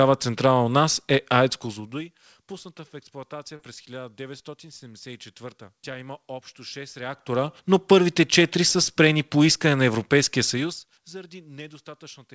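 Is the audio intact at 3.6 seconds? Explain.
No. From 3.56 to 3.60 s there is short concealed packet loss: about 30 ms of audio arrived too late, and the decoder covered the gap by extending the preceding sound before blending back. It is heard as a brief smear or wobble. On a spectrogram the preceding sound runs on smoothly with no fresh detail, then joins the real signal. On the waveform a short repeated or noisy stretch appears.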